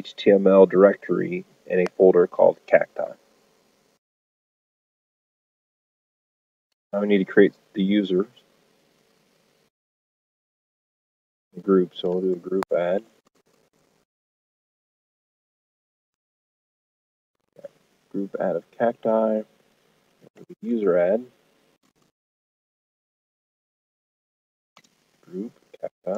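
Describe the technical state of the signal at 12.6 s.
A loud pop lands from 12.63 to 12.65 s, about 10 dB above the sound. It is likely a sudden voltage spike, such as a plug or switch transient.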